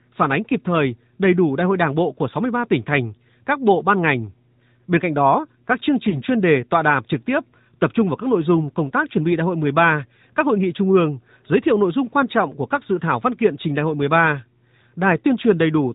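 Throughout the speech, AMR narrowband mobile codec coding sounds buzzy and synthetic, its damage plainly audible; the spectrogram shows nothing above 4 kHz, fitting the codec's 8 kHz sampling, here at 10.2 kbps. From 6.10 to 6.22 s, between "cạnh đó các chương" and "chuyên đề tọa đàm", a lost AMR speech frame brings a brief warbling dip, matching one missing 20 ms frame, visible as a smeared, weakened patch in the waveform.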